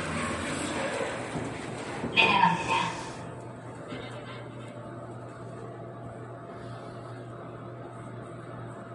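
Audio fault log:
Throughout, MP3 compression: the audio has nothing above 11.2 kHz and plainly audible codec damage, with a watery, swirling texture and smeared onsets. The likely cause is a low-bitrate MP3 encode, which fits about 48 kbps, where the encoder cuts the treble and drops weak frequency lines frame to frame.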